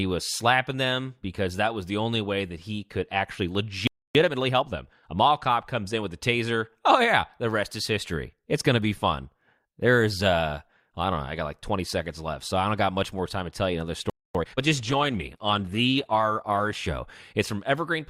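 A speech clip with two playback stalls, each followed by time-compressed catch-up, and one drop in stream quality. After "that he could actually" the sound goes silent from 3.87 to 4.15 s, about 277 ms, likely because the player ran short of data. After "to tell you another" a second 250 ms gap follows at 14.10 s. Each stall is followed by time-compressed catch-up. Speech runs hurried at normal pitch from 4.15 to 5.25 s at 1.25 times speed, ending at "cop comes in with". From 14.35 to 14.59 s it runs at double speed. From 14.79 to 16.79 s the adaptive stream plays at a lower bitrate. Nothing sounds above 12.2 kHz and codec artefacts thicken, which points to a switch to roughly 16 kbit/s Opus.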